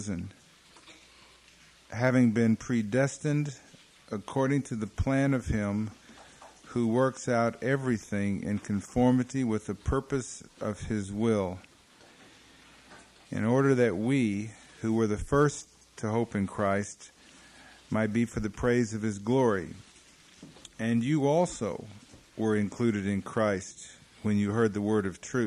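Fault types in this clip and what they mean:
No technical faults detected anywhere in the clip.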